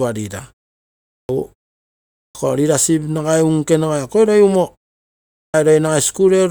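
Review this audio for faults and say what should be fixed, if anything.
Clipped start after a pause at 1.16, 2.22 and 5.41 s. After pauses of about 0.7 s, the output device sleeps. Roughly 130 ms of each onset is lost while it wakes. Keep the output stream active through silence, or disable the device's power saving.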